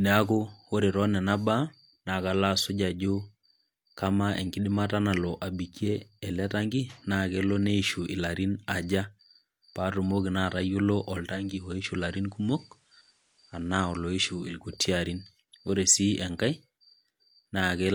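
From 11.14 to 14.73 s the speech drops about 2 dB and gains faint hiss: digital radio blending to analogue FM over half-second cross-fades.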